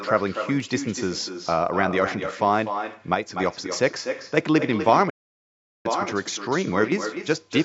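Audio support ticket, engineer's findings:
Echo with no canceller, whole clip. Every phrase comes back around a third of a second later, about 8 dB under the speech, thinner. Far end's loudspeaker feeding its own mic, and nothing on that side cancelling it, so our talker hears themselves after the network round trip. Check the far-end AEC first.

One channel drops out, twice: 3.15 to 3.40 s, then 6.84 to 6.92 s. Level dips by about 6 dB and snaps back, with no gap in the sound. Likely one stereo leg lost ahead of the mono fold-down, so only the shared content survives at half level. Worth looking at the capture or routing for that channel.

Playback stall, 5.09 to 5.86 s. Speech cuts dead mid-flow for roughly 0.75 s, then resumes. Likely the player starving for data or its thread getting blocked. Jitter buffer underrun or a scheduling hiccup on the playback side would fit. The mic chain's low-bass roll-off is just the call processing, not part of this.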